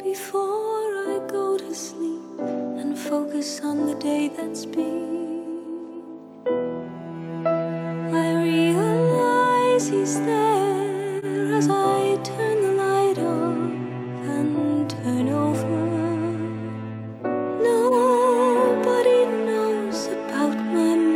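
Corrupt frames decoded at 1.73–1.75 s, 11.18–11.25 s and 17.88–17.94 s: damaged bits in a few compressed frames were decoded anyway, so misread gains and codes push energy into wrong frequencies. Each is a short chirpy blip, with the later ones louder.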